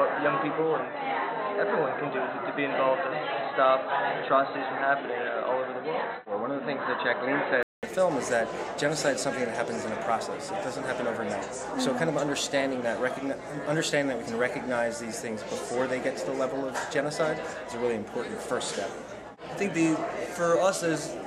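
Until 7.83 s the sound is dull, capped at 4 kHz, then clears after a 200 ms gap, likely an input switched to a poorer device.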